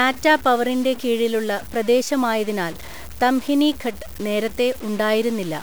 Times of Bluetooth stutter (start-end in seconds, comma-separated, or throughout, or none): none